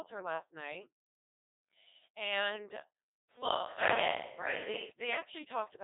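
From start to finish the speech passes through a Codec 2 vocoder. The heavy damage fits a rate near 2.4 kbit/s. Only pitch, voicing, energy and a rough spectral envelope survive. The decoder rebuilds the sound from sine waves, so the original waveform is lost. The result is robotic and buzzy. The band runs from about 300 Hz to 3.7 kHz, and nothing is left above 3.8 kHz.

From 3.3 s to 4.9 s the sound abruptly turns roomy and hollow, with thinner bass. A faint bed of room noise appears, roughly 30 dB below the speech. The overall level barely changes. This is likely a switch to a distant microphone, as if the close one dropped out. At 4.9 s the close sound returns just as suddenly.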